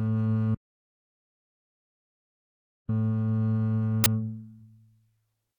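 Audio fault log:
0.55–2.89 s, audio dropout to silence: the input feed was likely lost while the recorder kept writing silence, so the music stops abruptly mid-flow and about 2.34 s is replaced by dead digital silence with no room tone, then the music resumes just as suddenly.
4.04–4.06 s, uninitialised buffer: a 20 ms block was sent to playback before any audio had been written into it, so stale memory contents were read out as samples, producing a brief, loud burst of harsh digital noise cutting through the music.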